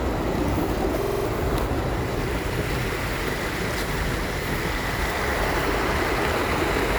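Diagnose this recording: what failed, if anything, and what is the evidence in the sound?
A system hang loop at the driver or buffer stage: from 1.02 to 1.25 s one 46.4 ms slice repeats exactly five times, a stutter at 21.5 Hz, fitting a 2048-sample ring buffer replayed while the system froze. About 0.2 s of sound is lost. Unlike a dropout, this repeats identical audio rather than leaving silence.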